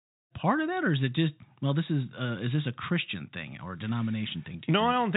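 Nothing here counts as a fault: the speech comes across as ordinary telephone-band audio topping out around 3.8 kHz, with a gentle fade-in over the first half second or so.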